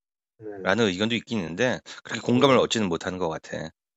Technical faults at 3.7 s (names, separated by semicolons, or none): none